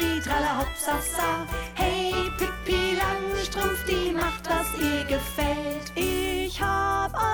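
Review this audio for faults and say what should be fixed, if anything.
Mains buzz runs from 1.17 s to 6.18 s: a steady, raspy buzz sitting around 15 dB below the main sound. It is built on 60 Hz. Sharp switching spikes, arriving twice per mains cycle, leak into the signal path, so the interference repeats at 120 Hz and spreads into harmonics reaching several kilohertz. That gives it an edgy buzz rather than a smooth hum. To prevent it, keep dimmers and rectifying power supplies away from the audio chain, and use properly shielded, balanced cabling.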